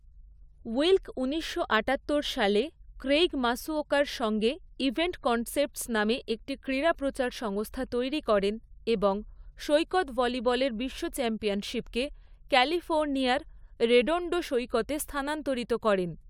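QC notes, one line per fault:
Nothing to flag here; I listened all the way through and didn't hear a single problem worth noting.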